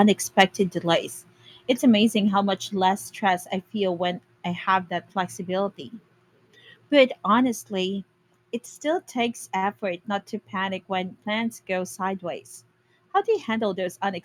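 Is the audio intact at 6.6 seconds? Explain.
Yes, the speech at 6.6 seconds plays through intact, with no dropout, click, distortion or other fault at that moment.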